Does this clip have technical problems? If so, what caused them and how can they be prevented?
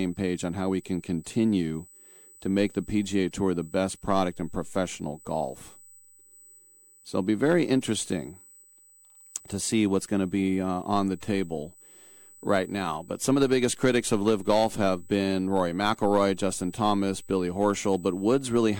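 Yes. A USB whine runs throughout at a fixed 8 kHz, about 30 dB below the speech. It comes from USB 125-microsecond microframe current leaking through power or ground. Prevent it with a powered hub, a ground-loop isolator or a better-shielded interface.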